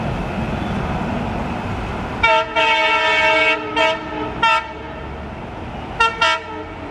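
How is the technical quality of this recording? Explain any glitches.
No audible glitches or faults.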